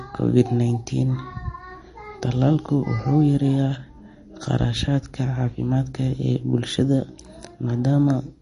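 Throughout the speech, nothing sounds above 10.6 kHz. The damage is plainly audible: a watery swirl, with metallic chirps on s sounds. This is likely MP3 compression. Short of bits, the encoder cut the treble and dropped weak frequency lines. That fits a bitrate near 40 kbps.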